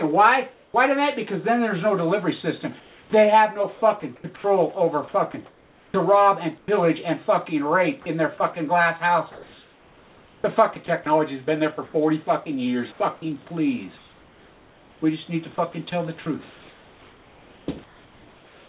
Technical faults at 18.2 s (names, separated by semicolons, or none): sound chopped by the voice detector